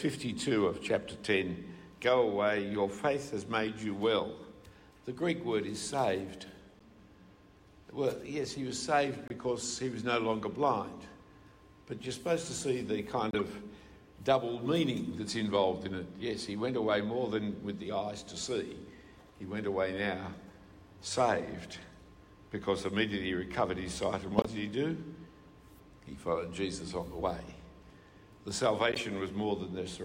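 At 6.79 s, 9.28 s, 13.31 s, 24.37 s and 28.92 s the audio carries a corrupt frame decoded: damaged bits in a compressed frame were played anyway, so misread gains and codes throw energy to wrong frequencies. Each lasts 30 to 100 ms, spanning a few frames. The first is a faint blip near -50 dBFS. Later ones grow louder, reaching about -15 dBFS at 24.37 s, and sound like short squeaks or noise bursts.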